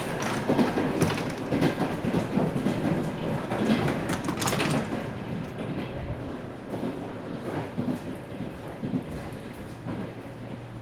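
The clip is a recording of sounds, and nothing is technically wrong with it.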